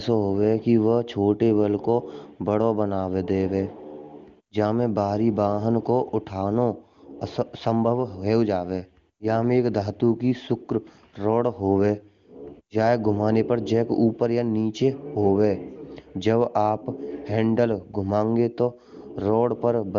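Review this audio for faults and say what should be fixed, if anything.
Nothing in this speech needs fixing. It passes through the AMR wideband (HD Voice) codec at 23.85 kbit/s, where any coding damage is faint at most.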